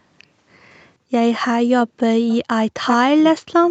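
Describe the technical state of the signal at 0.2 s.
At 0.2 s the speech is intact, with no fault present, only the expected band limit of a call path, with nothing above about 8 kHz.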